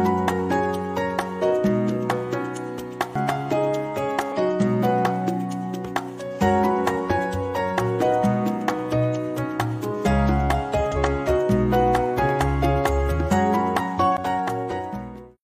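The audio has two kinds of trouble. First, there are two CD skips, at 3.15 s and 14.17 s. Each is a very brief dropout: a few milliseconds of mute at the first, around 15 ms at the second. Then playback resumes from a different spot. That's what happens when a knock or a disc flaw throws the laser onto another turn of the spiral. The player mutes briefly and picks up again one or more turns ahead or behind, so the sound jumps rather than just pausing. Second, there are two stretches of damaged data in the compressed stream, at 4.32 to 4.37 s and 10.92 to 10.98 s, roughly 40 to 60 ms each. There, part of the encoded file was corrupted, whether lost, zeroed or overwritten. The decoder misread or rejected those frames and lost sync, then hunted for the next valid frame header. The result is a short burst of garbled or missing audio before playback locks back on.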